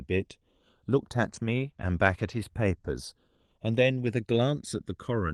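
Throughout the speech, the channels are drifting apart. The two sides run on separate clocks, about 200 parts per million apart. Their offset slides to under a millisecond by the end. Summed to mono, comb notches sweep slowly, giving a slow flanging.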